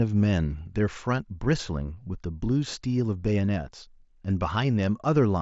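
Nothing stood out on listening to this speech clip, which comes through a Bluetooth mSBC headset link with the sound reaching up to about 7.7 kHz.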